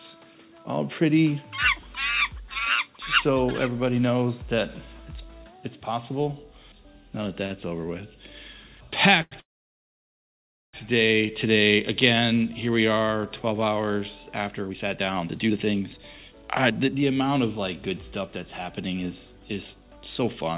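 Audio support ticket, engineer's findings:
Short stall from a late packet at 7.46 s (41 ms) and 9.22 s (93 ms). Jitter buffer ran dry; last sound stretched, then resumed. Nothing lost, slight buzz or dip.

Call audio freeze, 9.39 to 10.75 s. Sound fades to silence for about 1.3 s, then picks up where it stopped. Likely held-up packets emptying the jitter buffer.

Jitter buffer speed-up, 14.50 s to end. Playback runs at 117% with pitch unchanged. Short pitch-period chunks removed repeatedly, roughly a second in total, to cut built-up delay.

Band-limited to 4 kHz, consistent with a 64 kbps G.711 A-law call path.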